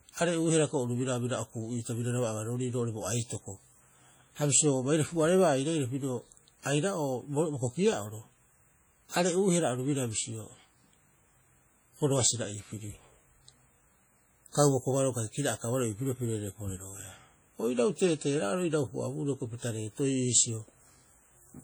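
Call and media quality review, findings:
Ringing, washy speech with hiss breathing along with the voice, throughout. Likely WMA compression, heavy, consistent with about 32 kbps. Continuous smearing, not gaps, which rules out packet loss.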